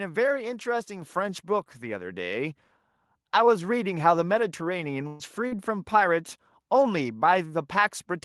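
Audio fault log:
1.02 s, microphone volume stepped up: the speech and the room noise behind it rise together by about 5 dB in a single step. The input gain on the capture device was raised at once rather than gradually.
5.07–5.23 s, burst of packet loss: for 122 ms the receiver extends the last received sound, which decays into a held buzz or hiss with no silent gap. Speech resumes about 120 ms further on, so that stretch is simply missing.
5.48–5.54 s, short concealed packet loss: about 40 ms of audio failed to arrive in time. The decoder bridged the gap with 36 ms of synthesized continuation before crossfading back, which is heard as a brief smear or wobble in the speech.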